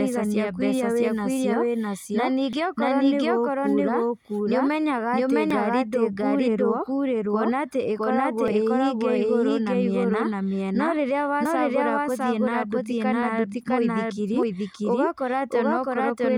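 Doubled audio track, throughout: a second full-band copy of the speech runs behind the original by roughly 0.7 s, at about the same level. It is dry, with no decay or room colour, so every syllable comes back as a distinct, equally loud repeat rather than as reverberation. This is likely a second capture of the same signal through a slower path, or an edit that left two out-of-step copies mixed together.

Audio missing between chunks, at 2.53, 5.51, 8.48, 11.45 and 14.43 s: the speech skips forward at a regular spacing of almost exactly 3 s. Each time, a few tens of milliseconds vanish and the two sides butt together with no silence, so the sound jumps slightly rather than pausing. The likely cause is a recorder or processor working in 3 s chunks that drops a short piece at each handover between one chunk and the next.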